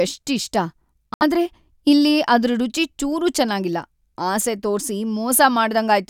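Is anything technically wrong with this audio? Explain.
Yes, there's one clear problem. From 1.14 to 1.23 s the speech just cuts out, a short hole of silence, and when it comes back it has jumped ahead rather than picking up where it stopped. That's most likely a Bluetooth dropout: packets didn't reach the headphones in time, so the output went silent until good data arrived. Roughly 70 ms of sound is missing, which fits a few lost frames.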